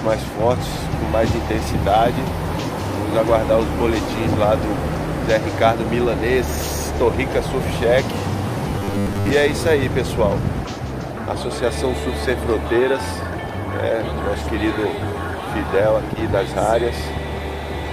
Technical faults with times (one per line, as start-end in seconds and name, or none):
8.79-9.30 robotic sound from repeated short buffers